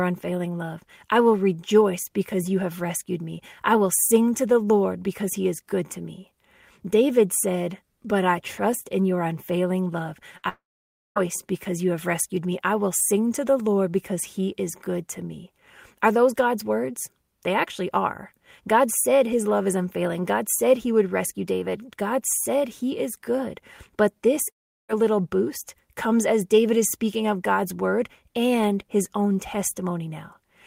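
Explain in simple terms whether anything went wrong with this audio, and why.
Two things go wrong, both in how the speech reached the listener.

Right after "in your unfailing love", at 10.37 to 10.45 s, there is a burst of packet loss. A few pieces of the audio went missing. For a split second the player fills the hole by stretching the last sound into a short buzz that fades. When the speech resumes, about 60 ms of it is gone.

Almost at once, from 10.49 to 11.18 s, comes a long network dropout. There is a brief fading buzz, then about half a second of silence. The speech returns at "because you have rescued", but roughly 0.7 s is missing. The same thing happens again at 24.50 to 24.91 s. This time there is a short fade, then about a third of a second of silence, and about 0.4 s of speech is lost. Both gaps sound like the connection itself stopped for a moment. The likely cause is a network stall, where nothing arrived in time to be played.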